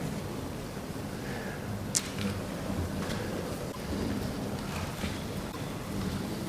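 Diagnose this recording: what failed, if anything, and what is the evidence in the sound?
The codec stage most likely failed: a broken MP3 bit reservoir, where frames went missing and the frames that followed reached back into the reservoir for their data but found bytes belonging to other frames. The sound jumps forward and leaves a brief disturbance, about 50 ms long, at 3.71 to 3.76 s and again at 5.51 to 5.56 s. Each disturbance spans roughly two 24 ms frames before decoding recovers.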